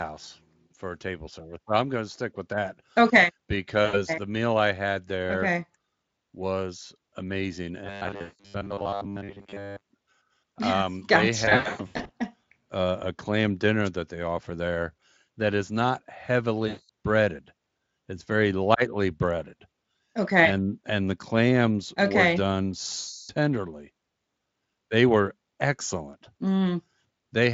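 VoIP packet loss concealed by the speech codec first appears at 3.85 to 3.97 s. About 80 ms of audio goes missing, and the decoder fills the gap by extending its last pitch and spectral shape with falling gain. The sound smears into a brief buzzy tail, and the speech stays thin for a moment after real audio resumes.

Robotic sound from repeated short buffers runs from 7.85 to 9.83 s. A rigid, metallic buzz at 100 Hz sits on the speech and only loosely tracks it, because most of the audio in this stretch has been replaced by repeats. The likely cause is playback starved of new data and looping its last block, which fits a 10 ms buffer. Inside it, at 8.21 to 8.47 s, packet loss concealment covers about 180 ms, so the speech sags further into fading buzz.

Packet loss concealment returns at 11.45 to 12.10 s, where about 400 ms is lost in scattered gaps over 640 ms, the longest run 120 ms. 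The speech stutters between real audio and decaying, coloured fill. It recurs at 16.67 to 16.89 s with about 220 ms lost, and at 22.99 to 23.31 s with about 300 ms lost. Each gap fades into buzzy noise, and the speech stays weak briefly after it ends. All of this rides on a Speex stream that carries only light coding damage of its own.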